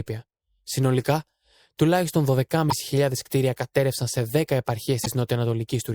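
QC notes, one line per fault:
2.70–2.72 s and 5.04–5.08 s, damaged data in a compressed stream: corrupted frames misdecode and the decoder loses sync, giving a brief chirp, squawk, click or short hole that appears as an abrupt break in the spectrogram and waveform.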